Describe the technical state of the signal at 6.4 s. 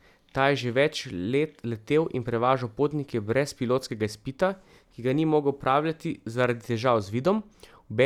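Nothing is wrong with the signal at 6.4 s; the audio is intact at that moment.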